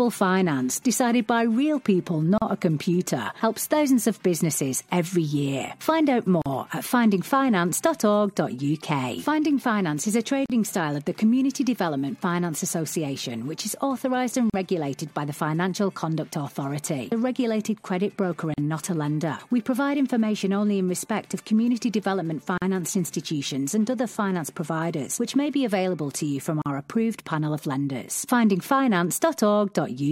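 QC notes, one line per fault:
2.38, 6.42, 10.46, 14.50, 18.54, 22.58 and 26.62 s: gap at a join of encoded pieces. The sound drops out for 37.8 ms at the first join and 40.3 ms at each later one, recurring every 4 s, then resumes where it stopped. Each separately encoded piece kept its encoder start delay and last-frame padding, so silence sits at every join; codec smearing softens the gap edges.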